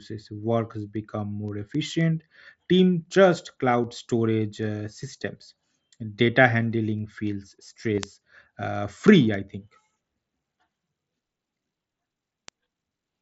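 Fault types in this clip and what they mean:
Concealed Bluetooth headset packet loss: at 7.95–7.98 s, 30 ms of audio went missing and was patched by repeating recent waveform, a brief held buzz.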